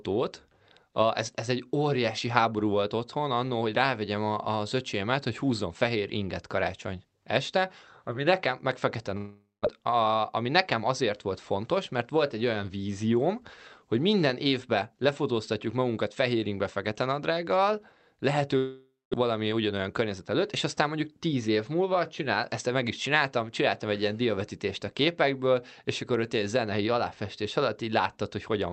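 At 9.17 s, right after "ami nekem meg fekete", the speech breaks off. The last sound carries on as a fading buzz, then goes silent for about 0.18 s. Speech resumes at 9.67 s with a gap in it. This is a long network dropout, likely caused by packets that never arrived. About 0.4 s of speech is simply gone. The receiver stretched the last sound to cover the hole.

From 10.22 to 11.31 s, ending just before "fontos mert volt egy", comes a jitter buffer speed-up. The speech runs 4% fast but keeps its pitch. After the dropout, delayed audio arrived in a bunch. The buffer then held roughly 50 ms too much. To shed that excess, the receiver cut out many tiny pieces, each one or a few pitch periods long.

The pattern repeats more strongly. At 18.57 s a second long network dropout begins. The fading fill is followed by about 0.23 s of silence. Audio returns at 19.15 s, again missing about 0.4 s. Then from 19.27 to 21.49 s, up to "múlva csinál ezt meg", another jitter buffer speed-up runs 6% fast. 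It removes roughly 150 ms of built-up delay. Over two seconds, that rush sounds hurried. All of this rides on Opus call audio whose band stops at 8 kHz.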